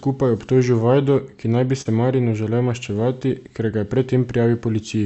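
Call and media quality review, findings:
Short concealed packet loss, 1.81–1.87 s, right after "ki naj bi": brief smeared wobble where about 40 ms never arrived and roughly 35 ms was synthesised by the Opus decoder's concealment from the preceding sound. Spectrogram: preceding spectrum stretched over the gap, then blends. Waveform: continued preceding sound, crossfade back.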